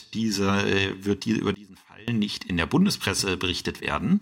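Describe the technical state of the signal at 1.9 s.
At 1.9 s the signal sits inside a sudden gain jump from 1.54 to 2.08 s, likely a digital gain step applied without any ramp. Speech and background noise drop together by about 23 dB right after "äh wird die über", then snap back before "nicht in der".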